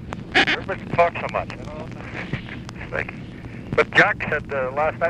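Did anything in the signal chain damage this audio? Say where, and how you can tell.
Yes. There are abrupt splices at 0.74, 1.86, 2.88 and 4.32 s, each heard as the sound jumping ahead. The first skip is longer, roughly 150 ms, and the others are about a third. The cause is likely a dropped buffer (overrun) at the driver or buffer stage, where samples were overwritten before being read. On a waveform each shows a sudden discontinuity without any gap, and a spectrogram shows a thin vertical broadband line where mismatched content meets.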